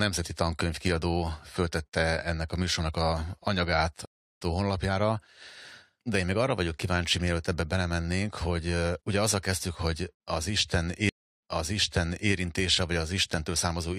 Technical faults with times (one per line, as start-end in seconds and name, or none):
4.05-4.40 stream reconnect
11.09-12.32 stream reconnect